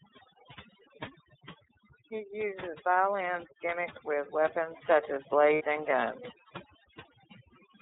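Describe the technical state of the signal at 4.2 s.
At 4.2 s the speech carries overdone noise removal throughout: bands near the noise estimate are cut away, leaving near-silent gaps with twinkling specks, unlike plain low-pass dullness. It also passes through the iLBC codec for the whole clip, coded independently in 30 ms frames, which fits a 13.33 kbps rate; nothing above 4 kHz survives, and the plainly audible rough, synthetic edge separates it from simple band-limiting.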